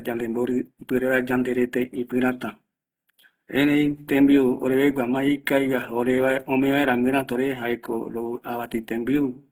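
It's a speech clip with plainly audible Opus compression throughout: grainy, rough, noise-filled detail from bands being filled in, likely a fullband music-mode encode around 16 kbps.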